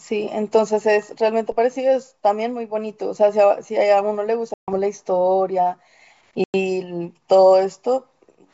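A DC step at 1.52 s shifts the waveform's zero line abruptly, producing a single low thump while the speech carries on unchanged. The offset does not hold. It drains away as a 5 Hz high-pass would bleed it off.

Packet loss on an ADPCM call opens hard-edged silent holes from 4.54 to 4.74 s and from 6.44 to 6.55 s, with about 140 ms and 100 ms missing, which suggests roughly seven and five lost packets. With the G.722 stream's faint upper-band hiss underneath, the decoder's predictor and step size have drifted from the sender's on resumption, so speech returns slightly distorted before settling.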